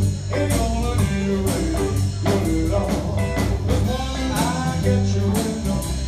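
No technical faults can be heard anywhere in the audio; the signal stays continuous throughout.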